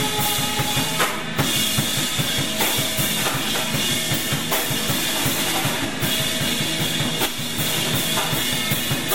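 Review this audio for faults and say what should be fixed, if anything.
Nothing needs fixing; the music shows no audible faults.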